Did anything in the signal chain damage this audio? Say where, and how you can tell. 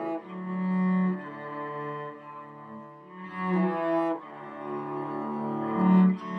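No, nothing in the signal chain damaged this audio.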